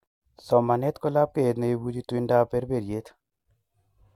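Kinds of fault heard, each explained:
No fault can be heard anywhere in this recording.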